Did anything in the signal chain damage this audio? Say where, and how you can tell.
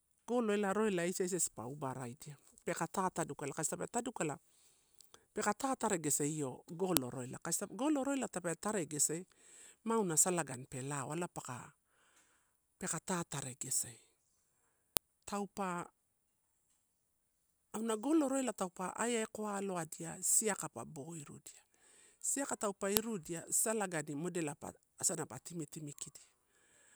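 Yes: file header played as audio, a sharp click at 6.97, 14.97 and 22.97 s, exactly 8 s apart. At the storage or streaming stage, 8-second WAV pieces were joined without stripping their headers, so each piece's header bytes play as samples, snapping regardless of the speech.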